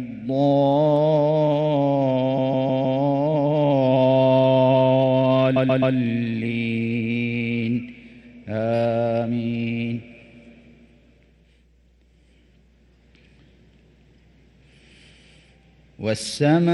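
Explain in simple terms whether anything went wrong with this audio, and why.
There are two spots of repeated frames, where a short chunk of compressed audio was sent again. At 2.37 s a 157 ms chunk stutters four extra times, and at 5.55 s a 131 ms chunk repeats three more times.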